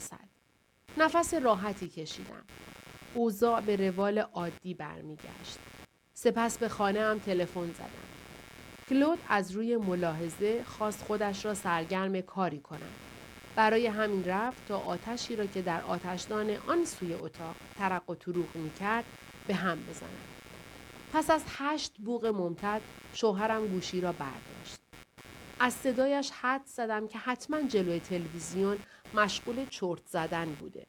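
From start to finish, a computer activity noise sits under the speech. It is a buzzy, chirping texture pulsing at around 150 Hz and roughly 20 dB below the signal. Processor or graphics load is disturbing the shared ground, so the buzz follows the computer, not the speech.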